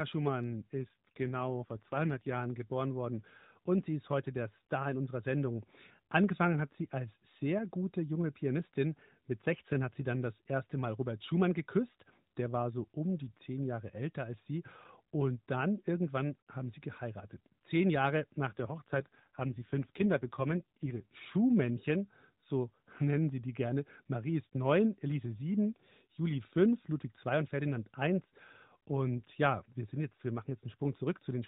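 Twice the link forces an AMR rate drop, at 0.82 to 2.36 s, just before "geboren worden und sie", and again at 18.48 to 21.06 s. The band stays the same and there is no gap, but the speech turns rougher and buzzier, which fits a step down from 12.2 to 5.9 kbps.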